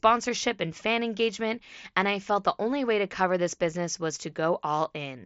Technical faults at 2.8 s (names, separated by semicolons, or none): none